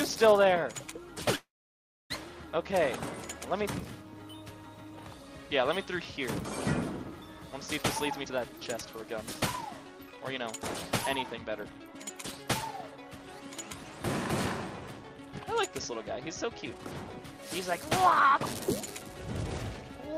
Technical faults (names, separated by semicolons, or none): call audio freeze; jitter buffer speed-up